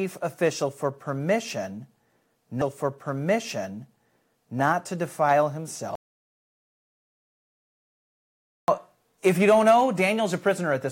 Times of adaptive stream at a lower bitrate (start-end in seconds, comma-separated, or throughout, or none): none